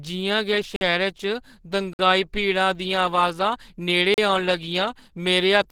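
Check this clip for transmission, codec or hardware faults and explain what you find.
Two problems show up: the speech carries codec damage from start to finish, and it drops out to dead silence three times.

All the way through, the speech sounds hoarse, grainy and a bit muffled, with plainly audible codec roughness even though the top end reaches about 20.2 kHz. That's most likely Opus compression in its hybrid speech mode, squeezed hard enough that it points to a bitrate around 16 kbps.

There are blocks of digital silence at 0.76 s for about 49 ms, 1.93 s for about 56 ms, and 4.14 s for about 38 ms. The sound cuts out and comes back with no fade, leaving a short hole each time. That's typical of an output buffer not getting filled in time.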